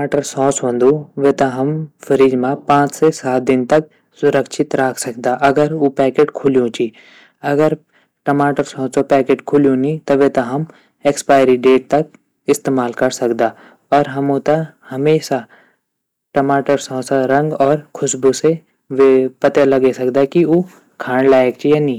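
Speech, and it's hard clipped the whole way through: the level was pushed about 8 dB past what the chain could pass, so the loudest peaks get sliced flat. Only a small share of samples, around 2 percent, hit the ceiling, but those flat tops add a gritty crackle on louder syllables.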